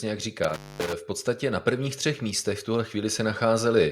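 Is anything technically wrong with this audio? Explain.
Yes. From 0.44 to 0.93 s an intermittent contact, a loose cable or plug opening for about 232 ms, breaks up the speech with crackle at the edges. From 1.64 s to the end, automatic gain rising lifts the input level by about 4 dB, so speech and background swell together.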